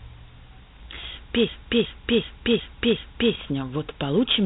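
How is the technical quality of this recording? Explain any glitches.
Technical quality is poor. The whole clip carries a heavy codec sound, and there are two distinct glitches: a brief crackle and a long stretch where the audio gets stuck repeating.

The codec problem runs the whole way through and sounds like Dialogic VOX ADPCM, the 4-bit format used by phone menus and voicemail systems. Nothing comes through above about 3.8 kHz, so the speech is dull and boxy. The coder only stores coarse step changes between samples, so it can't track the waveform closely, and that error rides along as a gritty hiss right on top of the speech. The damage is plainly audible, and the quality fits a 32 kbps stream.

At about 0.98 to 1.05 s there's a short burst of loose connector crackle. A worn or dirty contact was breaking and remaking the connection very quickly. That chopped the signal into rough fragments, and any DC on the line turned each break into a tiny pop. 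What you hear is a quick, irregular scratchy crackle lasting roughly 75 ms.

From about 1.49 to 3.34 s there's a system hang loop. The computer or driver froze, but the audio hardware kept cycling through the same ring buffer. One 0.37 s slice plays back five times exactly, which fits a 16384-sample buffer. It comes across as a stuttering repeat at about 2.69 Hz. Essentially no audio seems lost, but nothing new arrives until the loop breaks.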